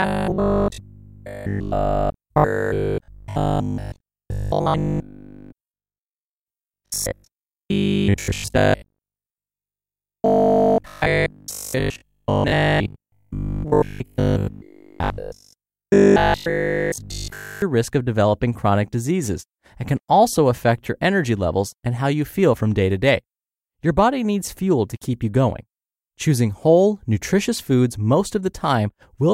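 From 0.02 s to 17.62 s the speech becomes a rigid, metallic buzz pitched at 50 Hz, loosely tracing the words: robotic sound from repeated short buffers, likely caused by audio arriving too seldom, so a 20 ms chunk was replayed almost continuously.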